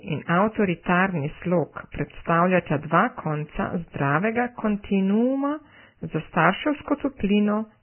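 Vorbis compression runs throughout this speech clip: nothing is present above 3 kHz, and the remaining treble sounds hissy and grainy, likely from heavy Vorbis coding at a bitrate around 10 kbps. Pre-echo appears from 1.92 to 1.94 s, where quantisation noise smears about 28 ms ahead of a sharp attack, leaving a brief hiss before the onset.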